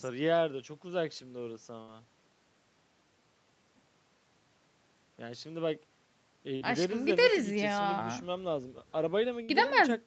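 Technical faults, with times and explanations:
1.81–1.91 s, 6.56–6.64 s and 9.43–9.51 s: burst of packet loss. At each point the receiver stretched the last received sound for roughly 55–65 ms, fading it into a held buzz or hiss, then resumed with about 60 ms of the speech skipped.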